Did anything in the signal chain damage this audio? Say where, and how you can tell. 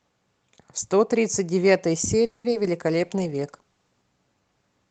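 Yes, at the network stage. From 2.25 to 2.46 s the last sound is stretched into a buzz that decays toward hiss. A spectrogram shows frozen, smeared harmonics fading out. The likely cause is a call audio freeze: delayed packets drained the jitter buffer, inserting about 190 ms without losing audio.

Short concealed packet loss follows at 2.50 s and 2.63 s, also a network fault. Each is a brief smear or wobble lasting about 30 ms. Roughly 20 ms of real audio never arrived in each case, and the decoder patched the hole by extrapolation. The waveform shows a slightly too-smooth splice.

A call bitrate drop at the codec stage runs from 2.88 to 4.10 s. The sound turns rough and watery, with the low point lasting about 1.1 s. Compared with the surrounding Opus audio, which stays band-limited at 8 kHz, the spectrogram looks blotchy and quantised, fitting an encoder cut from about 32 to 13 kbps.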